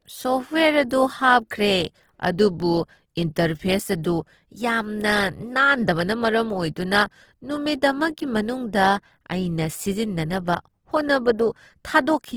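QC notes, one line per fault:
Throughout, Opus compression: the speech sounds rough and grainy rather than swirly, consistent with the codec's music mode spending too few bits, likely at a low rate near 16 kbps, and filling starved bands with folded or noise content. A spectrogram shows energy reaching about 20.2 kHz but with smeared, noise-like texture in place of clean harmonics. The waveform stays full, with no dropouts.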